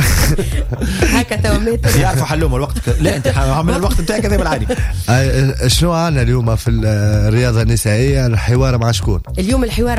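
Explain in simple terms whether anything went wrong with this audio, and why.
A loud pop at 8.82 to 8.84 s: one sharp click jumps out above the audio, which keeps playing underneath. It likely comes from a sudden jolt of electricity, such as a plug, switch or static discharge, briefly added to the signal.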